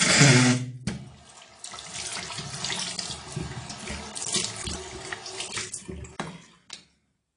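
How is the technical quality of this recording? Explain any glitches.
The recording is dull and smeared from start to finish, with a warbling, fizzy texture and nothing above about 10.5 kHz. That is the sound of AAC compression, likely at a low bitrate (consistent with 32 kbps), which cuts the top band and quantises sparse spectral detail so coarsely that the codec damage is plainly audible.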